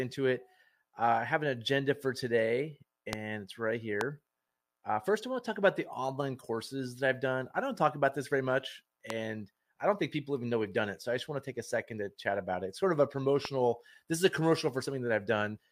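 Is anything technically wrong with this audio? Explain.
Yes, there are four loud pops, at 3.13–3.15, 4.01–4.03, 9.10–9.12 and 13.45–13.47 s. Each is a single sharp crack, about 15 to 20 dB above the sound, which carries on underneath. The likely cause is a voltage spike from a switch, plug or static.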